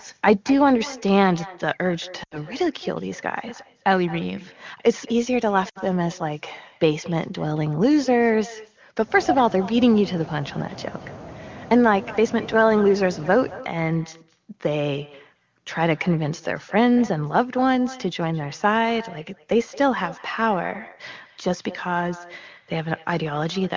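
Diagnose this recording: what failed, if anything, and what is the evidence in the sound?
At the far end, call processing has no echo canceller: the loudspeaker's output reaches the microphone and is sent straight back. Throughout the speech, every phrase returns about 20 dB quieter and roughly a fifth of a second late, as a thin shadow trailing the talker.

On the network's radio link, AMR speech frames were lost. The decoder concealed each gap by repeating its last good parameters at falling gain. From 2.23 to 2.38 s and from 5.69 to 5.79 s the speech drops to near silence, consistent with about 80 ms and 60 ms of missing frames.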